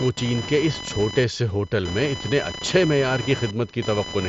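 Computer activity noise runs through the whole speech clip: a buzzing, chirping whine pulsing around 1 kHz, roughly 10 dB below the speech, from computer load changes disturbing the audio ground. A spectrogram shows harmonic lines that come and go beneath the speech, which ends near 7.7 kHz through the mSBC headset link.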